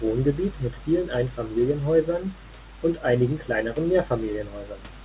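No faults can be heard in this speech, which carries the narrow telephone band of a call path with nothing above 4 kHz, consistent with G.711 A-law coding at 64 kbps.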